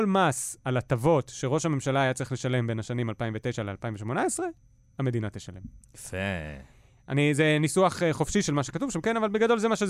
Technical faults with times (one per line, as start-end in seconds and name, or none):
7.92-9.89 timecode bleed